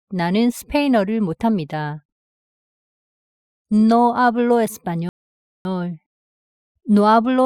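Two rebuffering stalls interrupt the audio, at 2.25–3.09 s and 5.09–5.65 s, adding about 0.84 s and 0.56 s. Each time, playback ran dry, fell silent and resumed exactly where it stopped, showing as a flat waveform and a blank full-band spectrogram gap.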